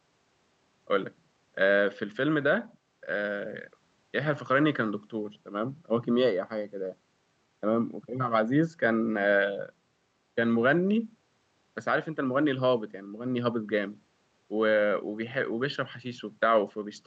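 Speech, with no technical faults audible anywhere in it.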